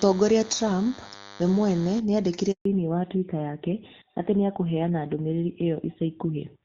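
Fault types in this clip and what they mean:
DECT cordless phone buzz: A nearby DECT unit's radio bursts every 10 ms were rectified in the audio path, adding a thin 100 Hz buzz around 20 dB below the speech for the first 2 seconds.
Handover gap: The call switched networks and no speech frames arrived for 140 ms, so the speech cuts to silence from 2.51 to 2.65 s.
Fallback to narrowband: The call dropped from wideband HD Voice to a narrowband codec at 2.65 s, removing everything above 4 kHz and leaving the remaining speech duller and rougher.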